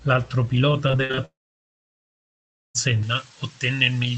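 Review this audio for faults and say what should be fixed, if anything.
Repeated packet loss (robotic sound) runs from 0.87 to 1.19 s. Six short gaps, the longest 46 ms, were each patched by stretching the preceding sound, so about 44% of that stretch is concealment. The result is choppy, with pieces missing. On a spectrogram the harmonics turn into repeated, smeared blocks, and the waveform shows a run of near-identical cycles between brief breaks. Preventing it means fixing the unstable link or giving the receiver more jitter-buffer headroom and forward error correction.

A long network dropout follows from 1.25 to 2.76 s. About 1.5 s of audio never arrived. The receiver extended the last sound briefly, and then roughly 1.4 s of near-silence remains. This is likely caused by a network interruption, not a recording fault. A spectrogram shows a short fading buzz, then an empty band until the sound returns with that part gone, and the waveform collapses to a flat line. 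A more resilient connection or redundancy across paths would prevent it.

Pre-emphasis left on affects the final section from 3.03 s to the end. The treble boost of a J.17-type curve was never undone, a curve that lifts 10 kHz about 11 dB above 1 kHz, though the call codec cuts the audio off at 8 kHz. The sound is thin, bright and sibilant. On a spectrogram the upper region is markedly denser than before 3.03 s, and the waveform looks spikier, with sharp transients dominating. Applying the matching de-emphasis stage at the receiving end prevents it.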